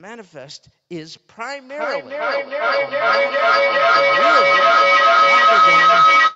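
Feedback howl from 1.69 s to the end: two devices on one call share a room, and each microphone-to-loudspeaker trip adds gain. The repeats build into a tone around 1.5 kHz, with repeats roughly every 400 ms, reaching about 15 dB above the speech.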